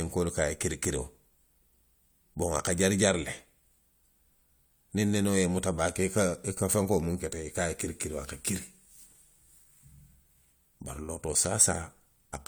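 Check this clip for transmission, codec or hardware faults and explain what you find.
No faults turned up when I checked this clip.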